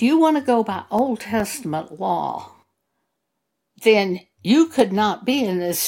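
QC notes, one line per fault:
0.99–1.40 s, CD scratch ticks: three short ticks, the longest around 2 ms, about five a second, where a blemish defeated error correction on successive turns of the disc and the player patched the speech. On the waveform they are brief spikes or flat gaps; on a spectrogram, thin vertical broadband lines.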